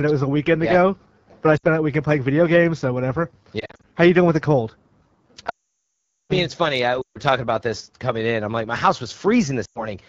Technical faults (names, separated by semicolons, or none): AMR wideband (HD Voice) codec; lost AMR speech frames